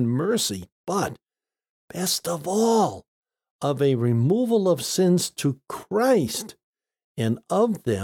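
No technical faults can be heard in this speech recording.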